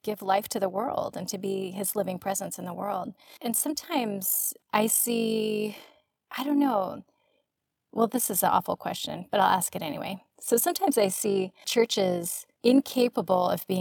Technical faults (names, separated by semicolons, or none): overlap-add ripple